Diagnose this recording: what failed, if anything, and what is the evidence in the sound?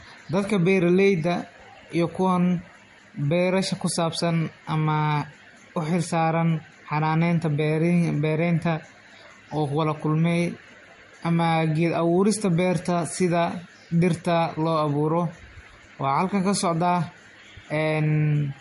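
The codec stage failed: the speech was likely transcoded between lossy codecs, consistent with MP3 at about 48 kbit/s re-encoded as Vorbis near 45 kbit/s. Throughout, nothing sounds above 11.2 kHz, and two distinct kinds of codec artefacts overlap, because the second encoder re-encoded the first one's damage.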